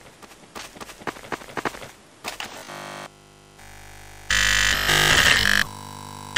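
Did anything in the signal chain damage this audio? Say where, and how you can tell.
Yes. Robotic sound from repeated short buffers, 2.58–5.14 s and 5.40–6.36 s: a rigid 50 Hz buzz almost entirely replaces the audio, likely a starved driver buffer looping 20 ms chunks. Unlike mains hum, it isn't added on top; the repeats follow the original only roughly.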